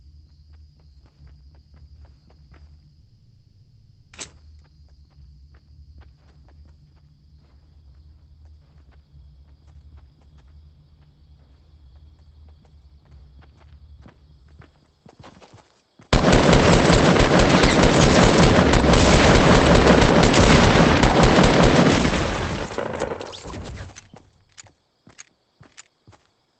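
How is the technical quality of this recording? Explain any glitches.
The main glitch is a break in continuity from 3.01 s to 4.15 s. For about 1.1 s, the audio is replaced by a drawn-out continuation of the last sound, heard as a buzz or hiss that fades and never drops to full silence. When normal audio returns, the material from that stretch is missing. This pattern is most likely a long network dropout: packets stopped arriving, and the receiver extended what it had until the stream resumed. The audio also carries the coding noise of a call codec, with nothing above about 8 kHz.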